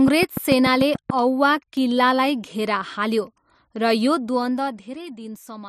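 From 0.08 to 1.11 s, a train of clicks ticks regularly, about seven per second, roughly 10 dB above the speech, before "औवा किल्लालाई". It's likely interference from nearby equipment.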